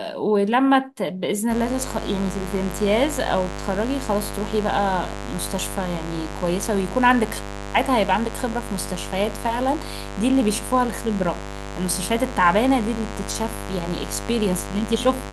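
A speech clip with mains buzz from 1.48 s to the end: a raspy 50 Hz harmonic series from switching spikes, fairly loud, roughly 10 dB below the speech.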